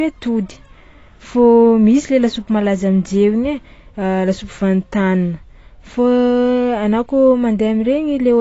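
From start to finish the speech carries AAC compression damage, plainly audible and most likely from AAC-LC at a low bitrate, one that fits something near 24 kbps. The cut-off is lowered, so the top end is simply gone and the sound is dull and muffled, with a watery, fizzy texture on sibilants. A spectrogram shows a hard ceiling across the whole clip.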